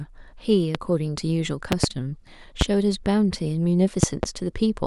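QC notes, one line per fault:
0.75–0.77 s, 1.72–1.86 s, 2.61–2.64 s, 4.03–4.26 s, loud pop: sharp thumps roughly 20 dB above the speech, doubled in the second and fourth, likely voltage pulses from a switch, plug, static or driver glitch.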